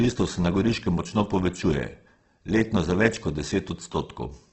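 Opus compression affects the speech throughout, likely at a low bitrate near 12 kbps in the codec's music mode. Starved bands are refilled with folded or noisy content, making the sound grainy and rough. A spectrogram shows a hard ceiling at about 8.2 kHz and smeared, noise-textured upper bands.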